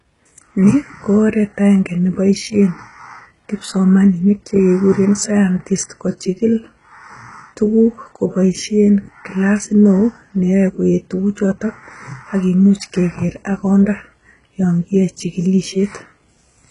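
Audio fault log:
Throughout, HE-AAC compression likely: speech treble is synthesized, gritty and metallic, heavily damaged at a very low bitrate, with nothing above 11.1 kHz.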